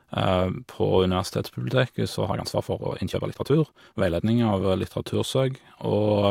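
Speech, with a time-stretched section from 2.11 to 4.23 s that suddenly sounds rushed at about 1.62 times the normal pace, pitch unchanged, likely from software dropping short pieces to shorten it.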